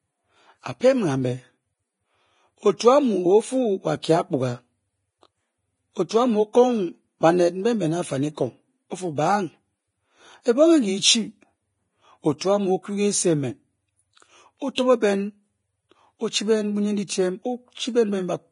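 Heavy lossy encoding, likely Vorbis at a low bitrate in the region of 27 kbps, runs through the whole of this speech recording. The encoder has removed everything above 10.5 kHz and quantised the remaining treble so coarsely that fine detail turns into hiss of similar energy. The sound comes out grainy and hissy, tones have a roughened edge, and consonant onsets lose their crispness. A pre-echo occurs from 14.75 to 14.78 s. The codec spreads its quantisation noise across a whole transform block, so when a sharp onset lands late in that block, noise sized for the loud part spills into the quiet moment just before it. The result is a short hiss about 31 ms ahead of the attack, which sounds softened and smeared rather than clean.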